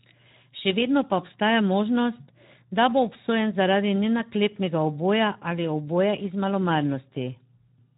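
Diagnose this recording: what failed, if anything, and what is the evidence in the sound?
The codec stage failed: Speex coding damage runs through the whole speech clip, plainly audible as hoarse, noisy speech. A spectrogram shows a hard ceiling with nothing above 3.8 kHz. The thin, starved excitation fits a low bitrate near 11 kbps.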